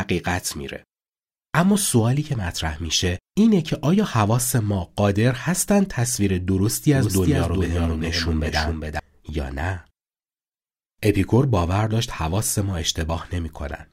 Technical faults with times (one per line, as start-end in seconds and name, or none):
6.95-8.99 doubled audio track